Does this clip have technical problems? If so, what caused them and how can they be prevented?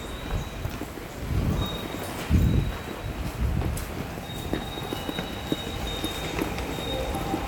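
No, no technical problems here.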